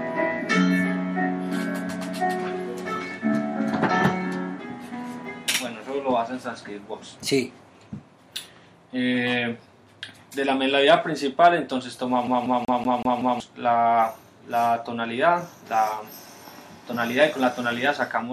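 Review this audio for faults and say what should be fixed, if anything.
From 12.27 s to 13.40 s the audio is caught in a CD stuck on one turn. A scratch sends the laser back one track at the same point of each rotation, so a 188 ms fragment plays six times, with a brief mute at every jump. The result is a fast, even stutter. On a waveform this shows as identical repeating blocks separated by tiny gaps. A spectrogram shows the same pattern copied side by side, with thin vertical dropouts at each seam. To prevent it, re-rip the disc in secure mode with error checking, or clean or replace the scratched disc first.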